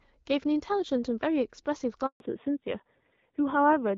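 At 2.06 s the speech cuts out in a handover gap. The phone is switching the call between networks, and no speech frames get through during the move. The sound drops away within a few tens of milliseconds. Silence follows until 2.20 s, a gap of 140 ms. Whatever was said in that stretch is gone, not just muffled.

From 2.20 s to the end, a fallback to narrowband takes over. Before the gap, the light HD Voice coding keeps upper speech detail, which fits AMR-WB at 12.65 kbit/s. After it, nothing above 4 kHz remains. Sibilants lose their edge and the speech turns dull and boxy. A rougher, buzzier texture also appears, which points to AMR-NB at 7.4 kbit/s. The change is abrupt and lasts to the end.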